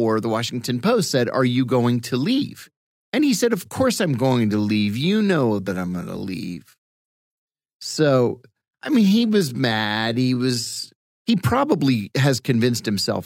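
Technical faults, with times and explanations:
4.19 to 10.93 s, time-stretched section: the speech abruptly slows to about 0.68 times its normal pace while its pitch stays unchanged, then snaps back to normal speed. Across this stretch the speech drags. This is likely software lengthening the passage to fill a set duration, repeating short slices of the waveform to hold the pitch steady.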